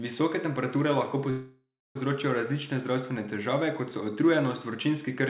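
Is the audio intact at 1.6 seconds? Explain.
No. At 1.6 s the speech is inside a call audio freeze running from 1.30 to 1.97 s, right after "temperature lahko". The receiver stretches the last sound into a fading buzz or hiss that decays into about 0.3 s of silence. This is likely a jitter buffer running dry while packets were held up in transit. Speech resumes at "različne zdravstvene težave kot" with nothing lost, now running about 0.65 s later than before.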